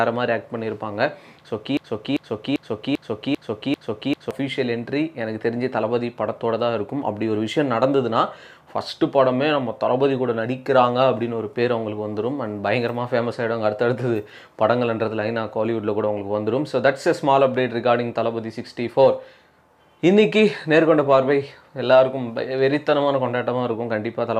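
From 1.77 to 4.31 s the audio gets stuck in a broken-record loop: a 394 ms fragment repeats six times back to back, likely a stalled player or stream resending its last chunk.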